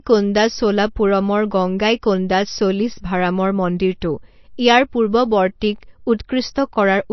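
Throughout, the speech was likely squeezed through low-bitrate MP3 compression, around 32 kbps: nothing survives above 5.9 kHz, and sibilants swirl watery and metallic.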